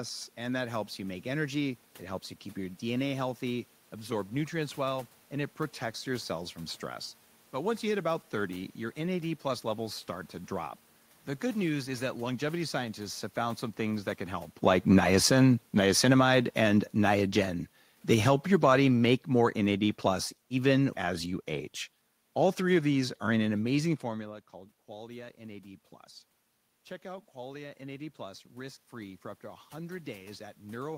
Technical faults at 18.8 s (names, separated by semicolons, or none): automatic gain falling